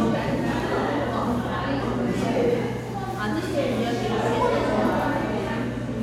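No technical faults can be heard anywhere in the audio.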